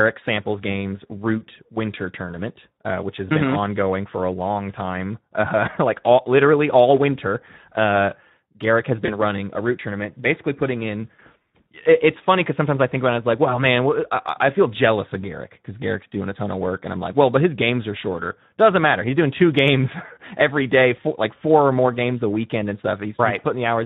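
Speex codec damage runs through the whole speech clip and is plainly audible. The hoarse, noisy voice points to a bitrate of around 11 kbps, where the CELP coder has too few bits to model the excitation and the upper band is filled with shaped noise. VoIP packet loss concealed by the speech codec occurs from 9.05 to 9.19 s. The gap fits a single lost 20 ms frame. The decoder filled it by extending the last pitch and filter with falling gain, and the voice stays weak or distorted for a while after, as later frames rebuild from that guess.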